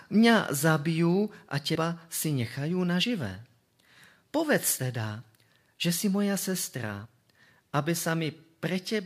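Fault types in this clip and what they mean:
Compressed frames skipped: whole chunks of the coded stream never get played, either because they're missing or because the decoder threw them out as damaged. The speech lurches forward by a few frames' worth, anywhere from a short sliver up to around 70 ms. It happens four times: right after "mňa zabijú a", just after "si nechajú", just before "teda že si moja", and near 7.0 s.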